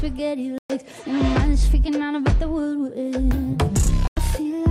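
The audio cuts to silence twice, from 0.58 to 0.70 s and from 4.08 to 4.17 s, then resumes further along as though it had kept playing. These holes are likely Bluetooth dropouts, where late wireless packets never reached the headphones and were discarded.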